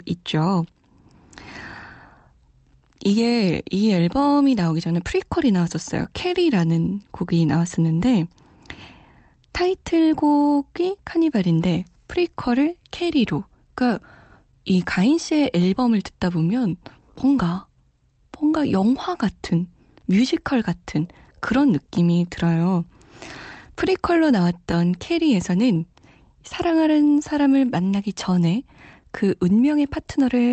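The sender's audio clock in this speech recording runs slightly slow against the receiver's, by roughly 2 percent. This is clock drift between sender and receiver. Because samples arrive a little more slowly than they are played out, the jitter buffer keeps drifting toward empty, and the receiver has to keep compensating for the whole 30-odd seconds. The result is a faint, uneven unsteadiness in pacing rather than any single obvious glitch. That compensation shows up as repeated timing corrections from 0.50 s to 30.43 s. The receiver stretches the audio by repeating small pieces, all in the same direction, which puts playback at about 99 percent speed and adds something like 400 ms overall. Each edit is tiny and irregularly spaced, so it is heard at most as slight hiccups or a tempo that doesn't quite hold steady. There are also two patches of scattered short gaps, where isolated packets came in too late and were concealed by extending the preceding sound. 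The first runs from 5.58 s to 8.14 s and has a few holes, each around 10 ms long. The second runs from 16.70 s to 25.77 s with about ten similar holes. Each leaves a brief tick or smear. All of this sits on an Opus call path whose top end stops at 8 kHz, which fits a moderate bitrate of around 32 kbps.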